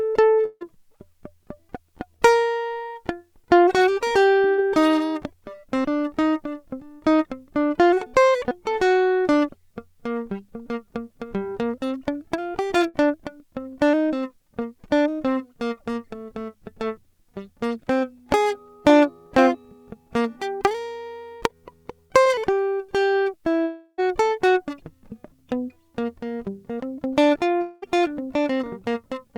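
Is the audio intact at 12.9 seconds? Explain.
No. From 12.88 to 12.96 s the music is interrupted by a burst of packet loss: a short run of audio packets never arrived in time to be played. The receiver covers about 60 ms by repeating the last fragment of sound and fading it down, so the music briefly freezes into a held, dying tone. Playback then resumes further along, with roughly 60 ms of the music skipped entirely.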